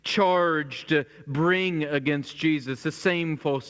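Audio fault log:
No fault logged; the speech arrives over a call path with nothing above 8 kHz, a band limit consistent with a wideband codec such as G.722 at 64 kbps.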